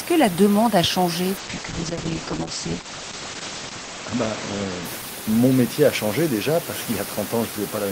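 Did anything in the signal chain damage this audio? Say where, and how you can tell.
Yes: a call bitrate drop at the codec, 1.38 to 6.05 s. Encoding fell from 32 to 9 kbps and bandwidth from 20 kHz to 8 kHz, so speech sounds muffled and coarse.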